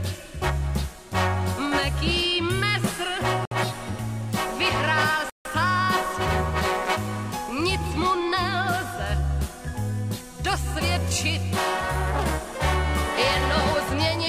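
At 3.45 s the sound drops to silence for 60 ms, then resumes. At 5.30 s it cuts out again, this time for 154 ms. Both gaps fit a Bluetooth stall. Radio interference likely held packets back until the headphone buffer ran empty.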